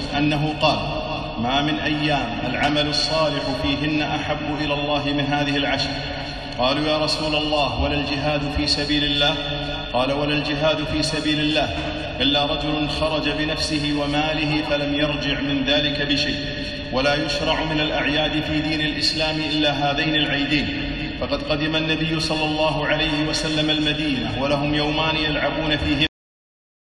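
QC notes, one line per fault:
26.07 s, cut-off end: the audio stops mid-sound and falls straight to digital silence for the final 0.75 s, with no natural decay. The last buffers of the recording were never written out, so the sound is truncated rather than finishing.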